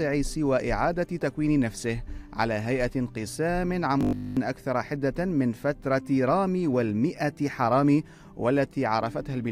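From 4.01 to 4.37 s the sound turns into a rigid, metallic buzz at 50 Hz. This is robotic sound from repeated short buffers, likely caused by the same 20 ms block being replayed over essentially the whole stretch while the real audio was skipped.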